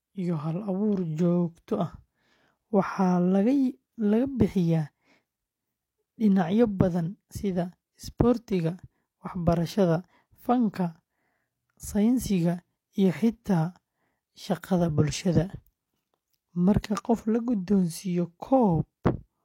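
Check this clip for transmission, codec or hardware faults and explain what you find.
One fault is present, audio missing between chunks. At 7.3 s the speech skips forward. About 50 ms of sound is gone, and the two sides join with no gap. The likely cause is a recorder working in 5-second chunks that drops a short piece at each handover.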